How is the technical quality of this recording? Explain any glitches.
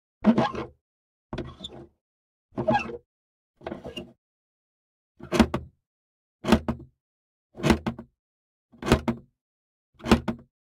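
The recording has one clear fault. Crude rate conversion runs from 3.78 s to the end. Its pattern suggests a 44.1 kHz to 48 kHz change made by simply repeating the nearest samples without filtering. This adds a gritty, inharmonic fizz roughly 30 dB below the sound, tracking loud and high-pitched moments.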